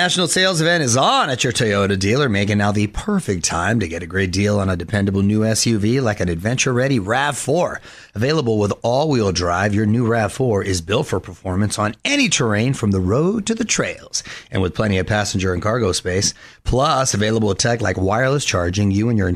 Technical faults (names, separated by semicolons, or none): none